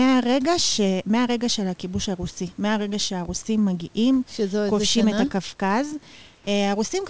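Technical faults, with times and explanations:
6.35–6.47 s, comfort noise in place of the background: For 120 ms the real room background gives way to a smoother noise about 3 dB quieter. The likely cause is discontinuous transmission, with the receiver filling the untransmitted pause with synthetic noise shaped like the background.
6.45–6.47 s, onset clipped by the voice detector: The speech resumes abruptly, its first 20 ms missing and covered by that same smoother noise. The likely cause is a voice detector slow to register the restart, so the soft beginning was never sent.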